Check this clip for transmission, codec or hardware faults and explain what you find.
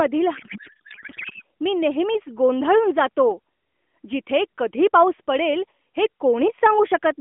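One fault is audible: a codec payload misread from 0.36 to 1.43 s. For that stretch the speech turns into garbled noise and warble that barely tracks it. The decoder is parsing well-formed AMR frames with the fields shifted, which fits octet-aligned packing being read as bandwidth-efficient. Unlike packet loss, the sound doesn't drop out or fade to comfort noise. It keeps going as wrong, synthetic-sounding sound until normal decoding resumes. Around it, the AMR narrowband audio, which fits the 12.2 kbps mode, has a 250 Hz to 3.4 kHz line band and light codec damage.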